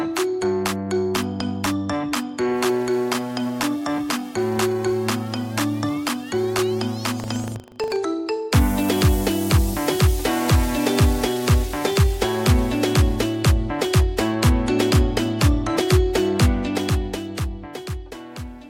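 From 7.16 to 7.99 s the sound takes on a robotic rattle at 25 Hz, the signature of buffer tearing: writer and reader of the ring buffer have slipped, so each period, which fits a 40 ms buffer, carries a small sliver, a few percent, of audio from about 100 ms earlier, with hard joins on each side. Unlike random dropouts or clicks, the buzz is strictly periodic and sounds only where signal is present.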